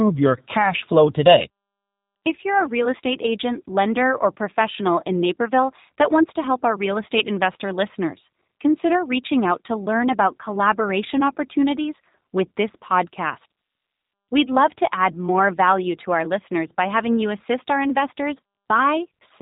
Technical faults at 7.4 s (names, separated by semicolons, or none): G.729 codec